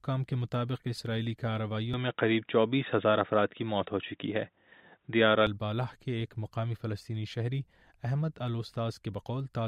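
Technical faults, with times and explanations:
1.94 to 5.47 s, input likely switched to a poorer device: the sound abruptly dulls, with nothing above 3.8 kHz and a level shift of about 5 dB. The spectrogram shows a sharp ceiling, and the waveform shows a step change without any gap.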